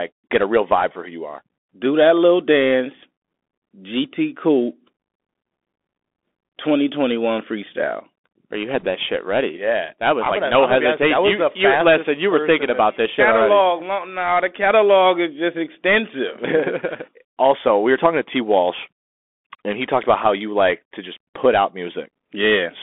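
A speech recording that sounds thin, muffled and boxed-in throughout, with nothing above about 3.5 kHz and little below 250 Hz. The s sounds are scratchy, loud bright moments smear, and a fine granular hiss sits under everything. This is the Bluetooth CVSD headset codec, whose one-bit up-or-down coding, consistent with a 64 kbps stream, cannot follow fast high-frequency movement. From 8.80 to 8.86 s a brief rushing crackle breaks through without any sharp click. These are bit errors on a Bluetooth voice link, at an error rate of a couple of percent. Each flipped bit nudges the waveform only slightly and the error fades, so the damage is noisy rather than sharp.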